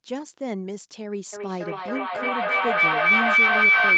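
At 1.33 s a feedback howl begins and continues to the end. A loudspeaker's sound re-enters a microphone on the same call, gaining level on every trip. It narrows to a tone near 2 kHz, with repeats about 0.3 s apart. It peaks about 13 dB above the speech.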